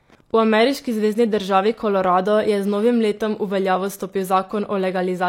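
From the start to the end, Wi-Fi interference runs under the speech. A nearby radio sends a beacon every 102.4 ms, and the audio circuit rectifies it. It is heard as a steady, faint ticking, nearly ten times a second. It sits roughly 35 dB below the speech.

From 0.67 to 2.47 s, sample clock jitter appears. The converter's clock wavers by under a microsecond, so samples land slightly off time. Steep parts of the waveform suffer most. A fine hiss, about 50 dB down, rides on the louder, brighter speech.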